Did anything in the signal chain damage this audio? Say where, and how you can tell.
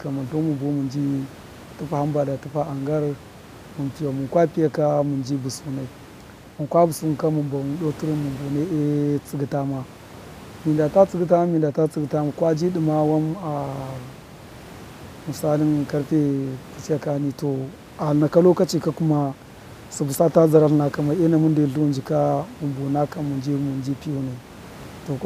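No, nothing damaged this audio.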